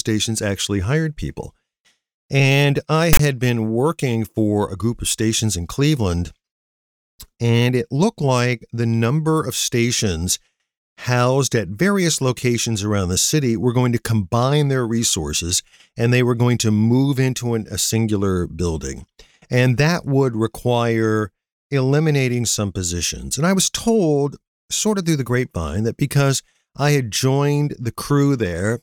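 Speech clip with one fault: file tags played as audio, from 3.13 to 3.19 s, just before "had been working for". Tag text read as samples gives a harsh, one-sided rasp. The zero padding then drops to silence. The burst has hard edges.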